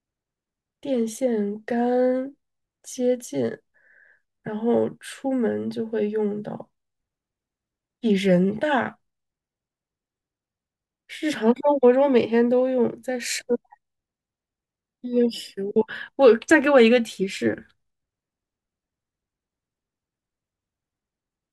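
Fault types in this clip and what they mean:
No faults detected.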